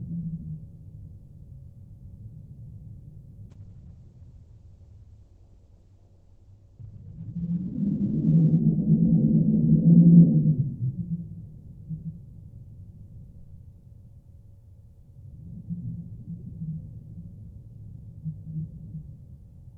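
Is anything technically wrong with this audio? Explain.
Yes. From 3.5 to 10.9 s there is a call bitrate drop. The encoder starved for bits, roughly consistent with 48 falling to 9 kbps. The top narrows from 20 kHz to 8 kHz, and the sound turns muffled and rough.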